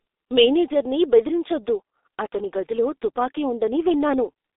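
G.723.1 codec damage runs throughout the speech. The audio is squeezed into a telephone band of about 300 Hz to 3.7 kHz, with nothing above 3.8 kHz, and its heavy, hoarse, smeared quality fits a very low bitrate near 6 kbit/s, where consonants blur across the codec's 30 ms frames.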